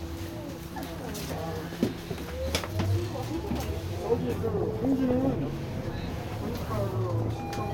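DAB burbling appears from 4.47 to 5.36 s and again from 7.10 to 7.54 s. Weak reception lets bit errors, somewhat under one percent, slip past error correction. Corrupted samples put short blips of noise in single sub-bands. The result is short noise blips over the sound.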